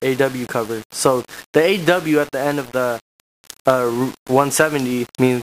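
Low bit depth without dither runs throughout: grainy distortion tracks the sound about 20 dB down, likely from rounding to 6 bits, leaving quiet passages gritty.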